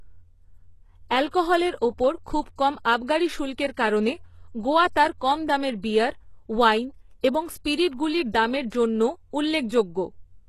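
Throughout the speech, the treble is plainly damaged. Sibilants sound gritty and metallic, and nothing is present above 12.3 kHz. This is likely HE-AAC compression at a very low bitrate, around 16 kbps, with the upper band rebuilt from copied lower harmonics that don't line up with the original.

Pre-echo appears before sharp attacks at 1.31–1.33 s, 2.41–2.46 s, 7.91 s (after "দামের বিয়ার ওয়াইন এবং", before "দামের জন্যও") and 9.69 s (after "দামের জন্যও"). The codec spreads quantisation noise across each transform block, so a brief hiss of 15 to 47 ms leads each onset and softens it.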